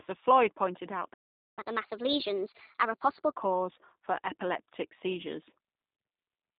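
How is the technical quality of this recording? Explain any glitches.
The quality is poor: narrowband, codec-coloured speech with a dropout, a sped-up stretch and two brief concealment glitches.

Throughout, the speech sounds boxy, slightly rough and synthetic, confined to roughly 150 Hz to 3.7 kHz. This is G.729 codec damage, consistent with an 8 kbit/s G.729A stream rebuilding speech from a filter and pitch model.

At 1.13 s, just after "pointed out", the audio cuts to silence for about 0.44 s before resuming. This is a playback stall, likely from the player running out of data.

From 1.59 to 3.33 s the speech runs fast and high, at 1.25 times normal speed and roughly four semitones up. This is catch-up at higher speed, as the player resamples its backlog to recover lost time.

At 3.73 to 3.76 s, and at 5.97 to 5.99 s just after "for epileptic seizures", the speech is briefly stretched into a buzzy or noisy sound that fades. 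This is VoIP packet loss concealed by the speech codec: one lost 20 ms packet each time was filled by extrapolating the previous pitch and filter.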